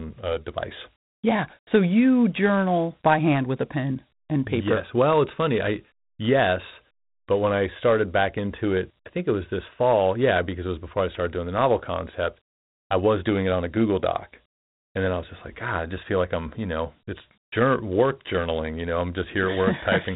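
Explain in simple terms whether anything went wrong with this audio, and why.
The speech sounds muffled and phone-like throughout, with a gritty hiss that follows the voice. This is Dialogic VOX ADPCM, a coarse telephone-system format that stores each sample very roughly and keeps nothing above about 3.9 kHz, which removes the crisp upper sounds.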